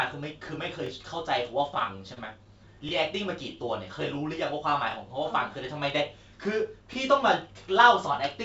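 At 0.86 s the speech is cut into 2-second chunks that overlap at their joins. Each new chunk begins about 23 ms before the previous one ended, so that sliver of audio plays twice and produces a click or stutter. The same doubling recurs at 2.89, 4.91 and 6.93 s, giving a regular tick roughly every two seconds.

Between 1.74 and 2.48 s there are repeated stalls (stutter). Packets fell behind playback and the jitter buffer ran dry six times. The receiver covered each gap by stretching the last sound, for 72 ms in total, and no single gap was longer than 24 ms. Nothing is lost, but about a tenth of that stretch is filled-in sound, so the speech drags and hiccups.

All of this passes through a G.722 call path at 64 kbps, which removes everything above 8 kHz.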